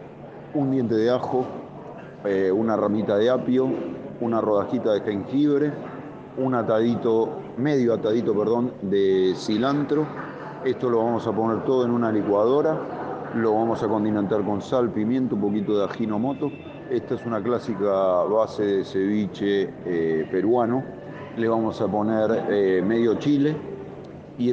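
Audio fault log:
No technical fault can be heard anywhere in the signal.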